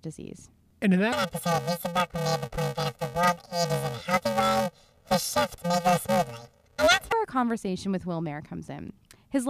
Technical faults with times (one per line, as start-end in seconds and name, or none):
1.12-7.12 planar audio read as interleaved